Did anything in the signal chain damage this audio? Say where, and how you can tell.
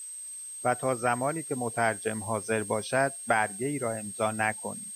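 Yes: a switching supply whistle runs throughout, a high tone wandering between 8.2 and 8.5 kHz roughly 10 dB below the speech, from a power supply's audible burst mode or beating with another supply leaking into the analogue wiring.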